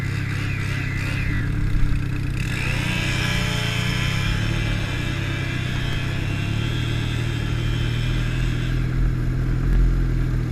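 Bluetooth stutter appears at 1.36 s (about 43 ms), 5.93 s and 9.73 s (about 21 ms each): late or lost packets made the receiver replay its last slice, giving a brief buzzing repeat. Unlike a dropout, it doesn't fall silent, and the sound resumes further on, as though it had kept playing.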